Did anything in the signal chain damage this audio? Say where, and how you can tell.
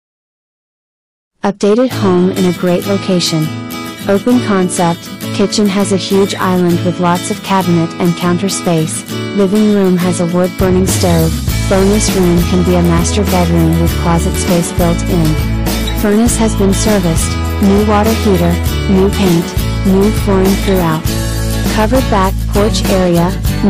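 Yes. Hard clipping runs through the whole clip, from a stage that ran out of headroom, most plausibly the converter or a fixed-point sample-format conversion. The signal arrived about 10 dB too hot, so roughly 7 percent of samples hit the ceiling and were cut flat. Every loud moment has a harsh, fuzzy edge. The waveform shows flat-topped plateaus, and the spectrogram shows broadband harmonic smearing reaching high kHz on each peak.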